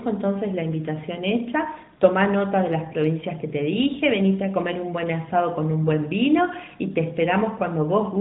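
Nothing in this speech recording stood out as a technical problem on listening.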